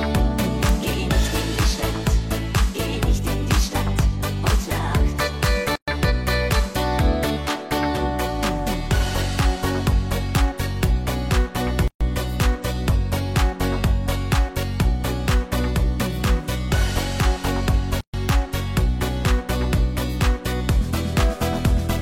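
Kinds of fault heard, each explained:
Integer overflow: where a loud peak runs past the largest value the integer format can hold, the sample wraps to the opposite extreme instead of being held at the limit, producing a violent crack far harsher than clipping. It strikes at 0.69, 5.45, 10.35, 10.84, 12.42 and 18.29 s. On a waveform each shows as a sample jumping sharply to the opposite sign; a spectrogram shows a thin full-height vertical streak.
Gap at a join of encoded pieces: the audio was encoded as separate pieces, about 6 s apart, and joined without trimming the encoder's start-up delay or final-frame padding, so silence opens in the continuous sound before it resumes where it left off. The gaps run 5.76 to 5.88 s (about 122 ms), 11.88 to 12.01 s and 18.01 to 18.14 s (about 130 ms each). The waveform drops to a flat line with smeared edges; a spectrogram shows a blank vertical band.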